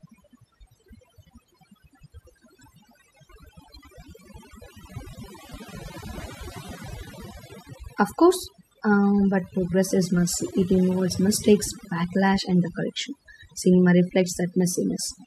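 From start to end the speech carries overdone noise removal: frequency bands near the estimated noise floor are pulled down or switched off, taking quiet parts of the voice with them. Unlike a noise gate's whole-signal muting, the background drops and breaks up into twinkling specks.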